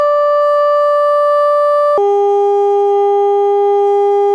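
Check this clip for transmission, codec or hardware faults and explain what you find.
From 1.98 s to the end at 4.34 s, the music abruptly drops about 6.5 semitones and slows to roughly 0.69 times its speed: a wrong sample rate fault. Samples are played back slower than recorded, with no conversion, which fits 32 kHz material played at 22 kHz.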